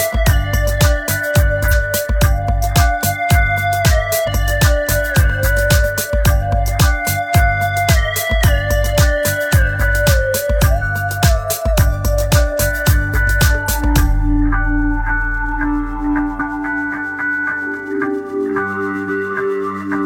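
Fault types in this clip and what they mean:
Damaged data in a compressed stream: corrupted bytes make the decoder misread frames and hunt for the next header, giving five brief glitches of 50 to 60 ms at 1.68, 4.23, 10.78, 16.35 and 19.04 s.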